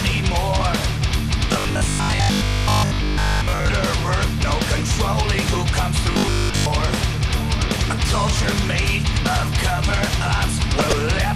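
Right from the start the whole thing has that dull, gurgly texture of MP2 compression, likely from a low-rate encode, something in the region of 80 kbps. The upper sub-bands keep dropping out and coming back, so the top end flickers, and what's left sounds coarse and granular. It's plainly audible and sits under everything, much like low-rate digital radio.

From 1.54 to 3.72 s, and again from 6.12 to 6.66 s, the sound goes rigid and metallic: robotic sound from repeated short buffers. The buzz sits at 50 Hz, which fits a 20 ms chunk being looped over and over while fresh audio isn't arriving in time, likely a playback or network buffer running dry. Most of each stretch is repeated material, so the real audio underneath gets skipped and only its rough shape survives.

Right near the end, from 10.76 to 10.93 s, there's a brief patch of DAB burbling, quick blips of noise in single sub-bands. 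That's bit errors getting past the error correction into the MP2 data. It's short, covering only a handful of frames, and points to a small error rate, well under one percent.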